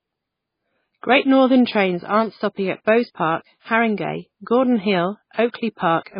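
MP3 compression, throughout the clip: the speech has nothing above 5 kHz and sounds heavily watery and swirly, with a metallic edge on s sounds and smeared attacks. This is likely a starved MP3 encoder, consistent with about 16 kbps, cutting the treble and zeroing weak frequency lines.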